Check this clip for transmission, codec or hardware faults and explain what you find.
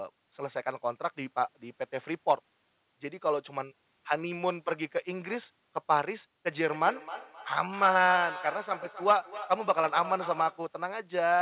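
One transmission fault is present. From 6.74 to 10.74 s there is feedback echo between two devices: a nearby second device replays the call, and the microphone recaptures it beyond its echo canceller's reach. Speech returns roughly every third of a second, thin and ringing, peaking about 13 dB below the voice.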